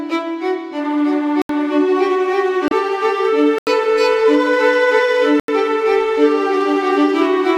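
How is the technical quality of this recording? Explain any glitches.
The music has three dropouts and one decoding glitch.

At 1.42 to 1.49 s, 3.58 to 3.67 s and 5.40 to 5.48 s, blocks of digital silence (76 to 85 ms) cut in without a fade. The output buffer likely went unfilled, which fits a 4096-sample buffer for the later two gaps.

At 2.68 to 2.72 s, damaged data in the compressed stream makes the decoder lose frame sync and search for the next frame header.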